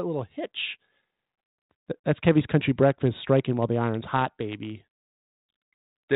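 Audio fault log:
No faults in this speech.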